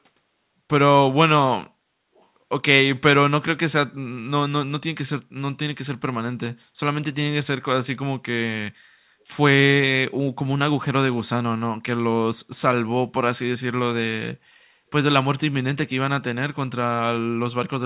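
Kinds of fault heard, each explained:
Echo leak: A faint, delayed copy of the speech surfaces briefly, from 2.15 to 2.26 s. It trails the original by 427 ms. It sits far below the speech, so it is easy to miss. The likely cause is a far end playing the call on a loudspeaker. Its echo canceller missed part of what its microphone caught. That leftover was sent back down the line. Here it is only a short scrap.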